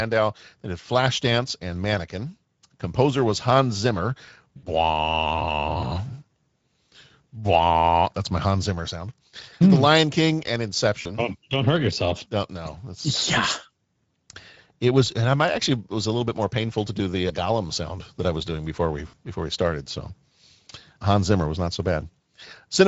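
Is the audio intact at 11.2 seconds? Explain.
No. From 11.01 to 11.20 s, just before "don't hurt yourself", VoIP packet loss concealed by the speech codec replaces about 40 ms of lost audio. The decoder extends the last pitch and filter, producing a fading buzzy tone or coloured noise. On a waveform this appears as a decaying envelope, and on a spectrogram as smeared harmonics. Underneath, the Speex codec damage heard throughout the clip leaves the audio hoarse and noisy, consistent with about 16.8 kbps, and the spectrogram shows grainy, blurred harmonics.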